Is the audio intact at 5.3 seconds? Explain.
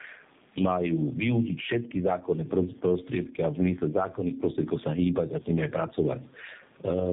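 No. At 5.3 seconds the audio is affected by two faults that run through the whole clip.

The first is gain pumping, most likely from an input gain set far too high with a fast limiter or compressor reining it in on every loud syllable. At 5.3 seconds the level is being pushed down under the speech and released in the gaps, a swing of roughly 15 dB. The room noise sits about 43 dB below the speech, and the speech is left squashed and flat in dynamics.

The second is tandem speech coding. The signal passed through G.729A at 8 kbit/s, was carried as G.711 mu-law, and was then re-encoded with AMR-NB at 7.4 kbit/s. That is two low-rate speech codecs in a row, with the second working on the first one's already degraded output. Nothing remains above 3.8 kHz, so at 5.3 seconds the speech sounds muffled and rough, with the warbly, smeared texture that stacked codec errors produce.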